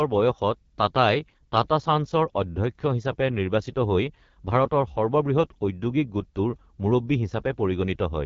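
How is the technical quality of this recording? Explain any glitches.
The quality is noticeably degraded by clearly audible wideband speech coding. AMR wideband (HD Voice) codec, throughout: the rough, raspy speech fits AMR-WB's 8.85 kbit/s mode, where too few pulses model each frame, leaving harsh grainy texture below a noise-filled 6.4 to 7 kHz band.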